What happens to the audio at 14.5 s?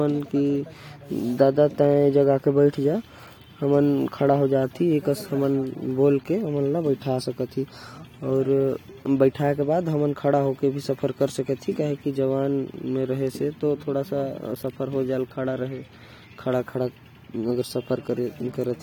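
Nothing goes wrong at 14.5 s; the speech runs through that moment intact, with no dropout, click, glitch or other fault audible there.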